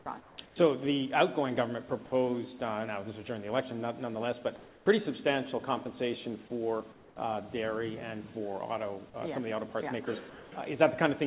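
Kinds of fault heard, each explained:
Onset clipped by the voice detector: From 0.04 to 0.06 s, a sound begins abruptly, missing its first 20 ms and its soft start. Noise fills that gap instead. The likely cause is a voice detector slow to notice sound resuming.
Comfort noise in place of the background: In four pauses, at 0.2–0.38, 0.46–0.56, 6.92–7.16 and 10.3–10.52 s, the real background gives way to a smoother noise, about 1 to 5 dB quieter. Transmission likely stopped during silence, and the receiver generated this filler.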